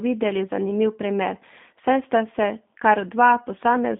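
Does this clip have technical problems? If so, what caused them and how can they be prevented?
Yes. G.729 codec damage runs throughout: band-limited 200 Hz to 3.6 kHz speech, rebuilt from filter and pulse models, sounds rough and synthetic, consistent with an 8 kbit/s G.729A stream. Prevent it by using a wideband codec such as Opus or G.722 on the call path.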